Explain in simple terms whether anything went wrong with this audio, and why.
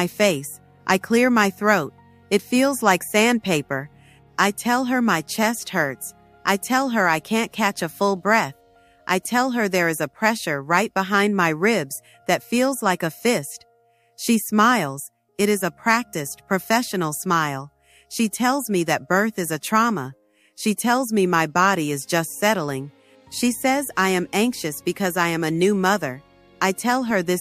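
No faults can be heard.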